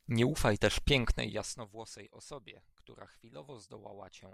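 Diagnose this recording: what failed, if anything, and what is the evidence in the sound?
Zipper noise from a gain stage in the driver or buffer processing. Between 1.02 and 1.75 s the speech drops by roughly 20 dB in 3 dB jumps, about ten a second, and each jump leaves a faint tick, giving a zipping texture under the fade. Instead of interpolating across samples, the gain is updated once per block. The waveform envelope forms a staircase; a spectrogram shows thin vertical broadband lines at each step.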